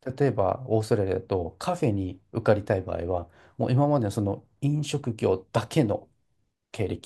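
No technical faults can be heard anywhere in this speech recording. There is nothing to place on a timeline.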